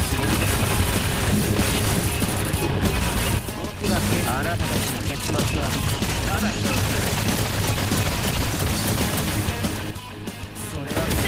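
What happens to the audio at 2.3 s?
Nothing goes wrong at 2.3 s: the audio plays through that moment intact, with no dropout, click, distortion or other fault.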